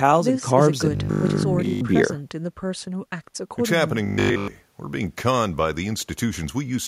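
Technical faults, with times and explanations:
0.91–1.81 s and 4.06–4.48 s, robotic sound from repeated short buffers: the speech turns into a rigid metallic buzz at 50 Hz, with essentially all of the real audio replaced. It's likely the same 20 ms chunk looping because fresh audio arrived too seldom.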